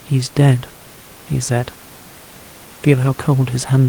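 A short bit of speech with faint room noise sitting about 23 dB below the talking, and nothing technically wrong with it at all.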